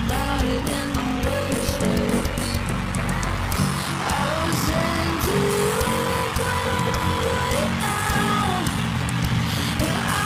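The whole clip has a steady buzz at about 46.9 Hz under the audio, and everything drags, running at about 0.861 of normal speed while staying near its usual pitch. That's a block size mismatch (padded): one stage hands over shorter blocks than the next stage reads, which fits a 1024-sample read, and the shortfall in each block gets filled with silence. Those tiny gaps repeating at the block rate are the buzz, and they're also what stretches the timing.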